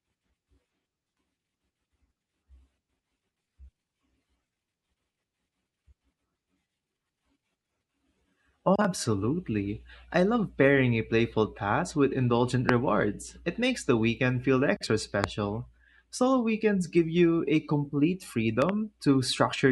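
Loud pops occur at 12.69–12.71 s after "playful task with indulgent", at 15.24–15.26 s after "the weekend feel extra", and as a double pop at 18.62–18.71 s after "give you a complete". They are likely voltage spikes from a plug, switch, static or driver glitch, landing about 25, 20 and 15 dB above the speech as sharp thumps while the speech continues underneath.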